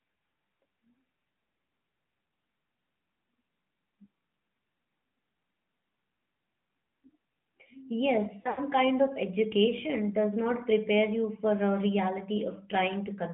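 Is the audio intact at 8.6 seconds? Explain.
No. Lost AMR speech frames hit from 8.42 to 8.60 s, ending just before "kind of education does". The decoder filled the gaps by repeating its last pitch and vocal-tract settings at falling gain. The longest gap, about 80 ms, sounds drawn out and fading, with a brief dip or warble from the one other lost frame.

The AMR narrowband mobile codec also colours this moment. The band runs only from 150 Hz to 3.5 kHz. The sound is plainly buzzy and synthetic, which points to a mid-rate mode near 10.2 kbps.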